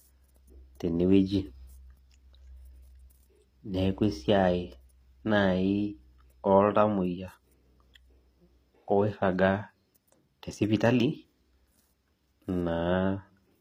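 From start to finish, the treble is not the real thing. The upper band sounds copied from lower frequencies and smoothed over, so s sounds turn gritty and metallic. Nothing sits above 15.4 kHz. This points to HE-AAC compression, likely at a low bitrate near 24 kbps.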